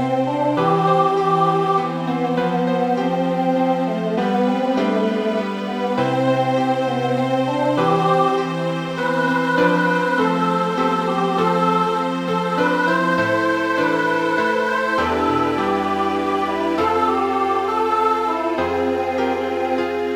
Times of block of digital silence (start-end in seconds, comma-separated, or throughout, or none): none